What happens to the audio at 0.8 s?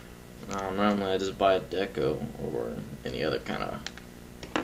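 Video or display buzz runs through the whole clip, including 0.8 s: a screen or video cable couples a 59.94 Hz field-rate buzz, plus a 15.7 kHz line-rate whine, into the sound, roughly 20 dB below it.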